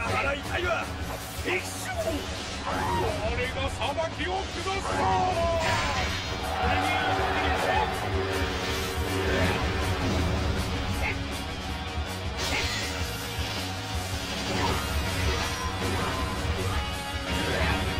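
Throughout the clip there is channel delay with comb filtering. One channel arrives roughly 10 ms behind the other, and when the two are summed to mono, their shared content cancels at regularly spaced frequencies. The first notch falls near 50 Hz and the rest repeat about every 100 Hz above it. The audio sounds hollow and phasey. On a spectrogram this appears as evenly spaced, fixed dark horizontal stripes running the full length of the file.

From 2.26 s to 5.55 s comes a Bluetooth SBC bit pool drop. The link appears to have been congested, and the encoder cut its bit budget, which fits a bit pool falling from 31 to 15, around 105 kbps. The highest sub-bands lose their bits and the remaining bands are quantised coarsely, so the treble dulls and a gritty, grainy noise rises until the rate recovers. A spectrogram shows the upper bands thinning or going dark across that stretch, with speckled noise filling the lower region and clean edges where it begins and ends.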